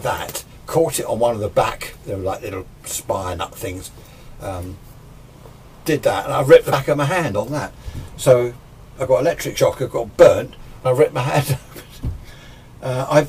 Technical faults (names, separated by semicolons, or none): compressed frames skipped